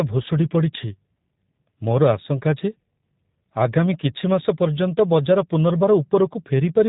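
G.729 codec damage runs throughout this speech clip and is plainly audible. With nothing above 4 kHz, the speech sounds muffled and slightly rough and synthetic, because each 10 ms frame is rebuilt from a vocal tract filter, a pitch predictor and a few pulses. That sound fits an 8 kbit/s G.729A stream.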